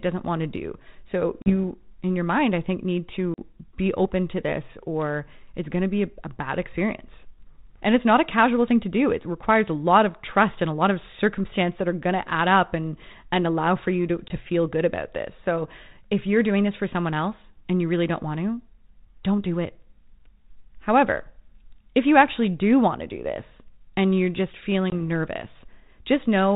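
Packet loss on an ADPCM call cuts hard-edged holes at 1.42 s, 3.34 s (after "mind I think need"), 14.28 s and 24.9 s, losing about 40, 40, 20 and 20 ms, roughly one or two packets each. The decoder's predictor and step size desynchronise, so each return sounds briefly distorted or misleveled before settling.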